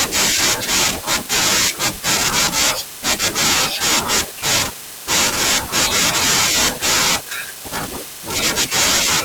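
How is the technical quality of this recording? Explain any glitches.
There is one glitch in this speech recording. From 2.45 to 2.50 s, damaged data in the compressed stream makes the decoder misread frames and lose sync, producing a brief glitch in the sound.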